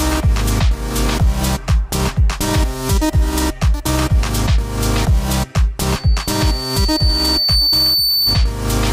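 Loudspeaker feedback squeal runs from 5.88 to 8.53 s: a microphone is picking up the loudspeaker it drives, and at 4.5 kHz the loop gain tops one, so a single piercing tone swells over roughly two seconds until it matches the level of the sound itself.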